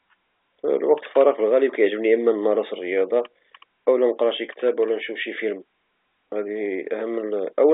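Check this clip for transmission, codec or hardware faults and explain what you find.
Nothing wrong turns up here: the speech just carries the narrow 300 Hz to 3.6 kHz band of an ordinary G.711 phone line, which is simply how that kind of call normally sounds.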